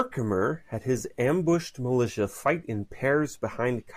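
Throughout this speech clip, imaging from linear upsampling dulls the top and adds a faint metallic shimmer from mirrored energy around 11 to 22 kHz, roughly 35 dB down.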